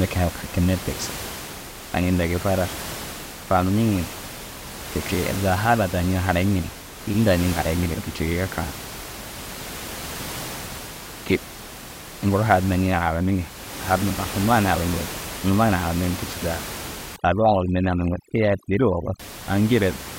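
Overdone noise removal, from 17.16 to 19.20 s: an over-aggressive noise reducer mutes frequency bands near its noise estimate, leaving twinkling near-silence between phrases and taking quiet parts of the voice with it.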